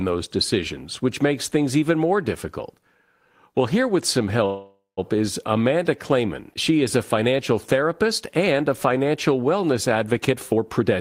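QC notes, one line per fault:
4.45–4.99 s, call audio freeze: Right after "here with some", the flow of packets stalled and the jitter buffer ran dry, likely because packets were held up in transit. The receiver stretched the last sound into a fading buzz for about half a second, the final 150 ms of which is silence. When the packets caught up, speech resumed exactly where it stopped. Nothing is lost, but a 0.52 s gap now sits in the sentence and pushes everything after it later.
10.31–11.01 s, jitter buffer speed-up: After "and a financial wellness", the buffer was holding more audio than its target, so the receiver cut short pitch-period-sized slices again and again to bring the delay back down. Roughly 150 ms disappears over the last 0.7 s. The speech plays at about 118% speed but keeps its original pitch, so the closing words sound hurried and clipped rather than higher.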